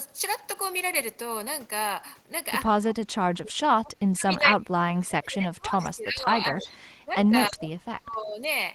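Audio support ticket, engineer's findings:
Speech suppressed in double talk, 2.9–3.58 s, then again 3.74–8.48 s. Level ducks hard, around 25 dB first, deeper (about 35 dB) second. Likely the echo canceller mistaking near-end talk for echo during overlap and clamping everything.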